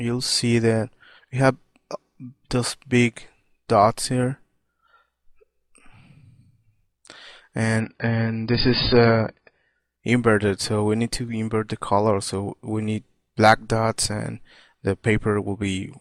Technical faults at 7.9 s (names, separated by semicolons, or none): adaptive stream at a lower bitrate